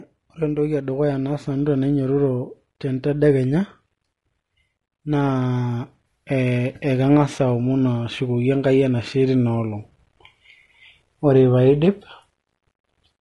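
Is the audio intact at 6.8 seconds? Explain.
No. At 6.8 seconds, as throughout the clip, the speech sounds rough and grainy, with noise filling the gaps between harmonics and a thin, synthetic top band. This is likely low-delay AAC compression: short frames resolve pitch poorly, and at a low bitrate around 32 kbps coarse coding adds this roughness.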